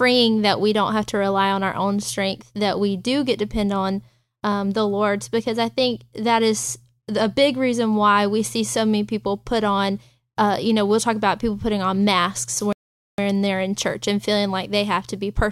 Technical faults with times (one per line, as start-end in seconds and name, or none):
12.73-13.18 playback stall